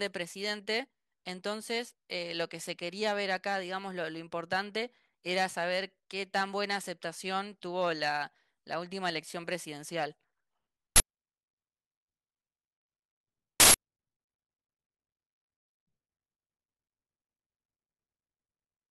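At 10.96 s a 40 ms burst, then at 13.60 s a 160 ms one: an uninitialised buffer, where blocks played out before audio was written, so stale memory became loud digital noise. Each shows as a sudden loud waveform block and a broadband vertical slab on a spectrogram.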